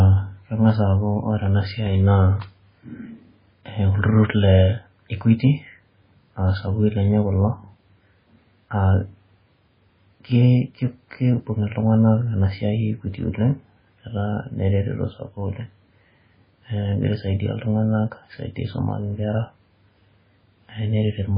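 Throughout, the speech cuts off above 5 kHz and sounds watery and swirly with smeared attacks, likely heavy MP3 compression at something like 16 kbps.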